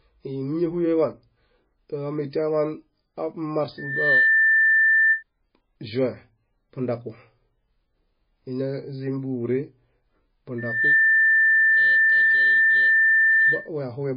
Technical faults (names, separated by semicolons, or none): MP3 compression; loudspeaker feedback squeal